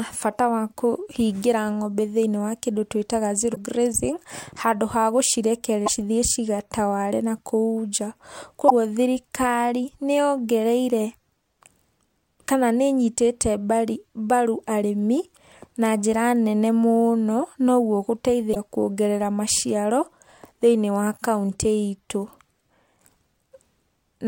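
Damaged data in a compressed stream at 3.52–3.57 s (just before "grazing handũ ha"), 5.84–5.90 s, 8.66–8.72 s (before "thirikari niyongereire") and 18.51–18.57 s: corrupted frames make the decoder lose sync, giving brief glitches in the speech.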